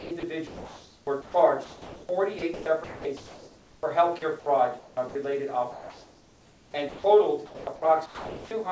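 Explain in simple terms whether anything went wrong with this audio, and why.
From 0 to 4.22 s, 4.79 to 5.15 s and 5.72 to 8.51 s, the sound keeps cutting out into a steady hiss. This is likely sound chopped by the voice detector, which swapped quiet passages for comfort noise. Everything above 8 kHz is absent, as expected from the call codec.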